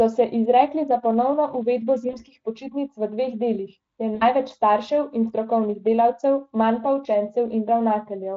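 At 2.09 s and again at 4.15 s, VoIP packet loss concealed by the speech codec, Speex here, stretches the sound into a fading buzzy tone or coloured noise. The gaps, about 40 and 60 ms, fit two and three lost 20 ms frames.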